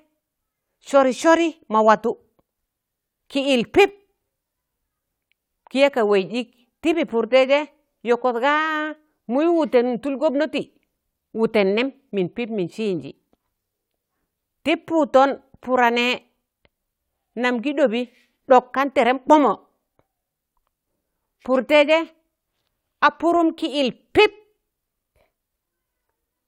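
Nothing in the recording stood out as a technical problem on listening.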